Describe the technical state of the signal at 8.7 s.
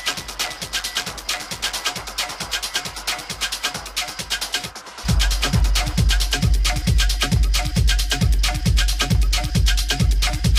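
At 8.7 s the signal is intact, with no audible technical fault at that moment.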